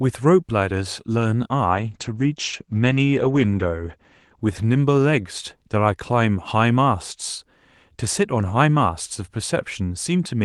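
Call bitrate drop from 1.72 to 5.49 s: the call's bandwidth estimate fell, so the encoder coded the speech far more coarsely, which fits a fall from 32 to roughly 12 kbps. Audible top end shrinks from 12 kHz to 8 kHz, sounding muffled and rough for about 2.2 s at worst.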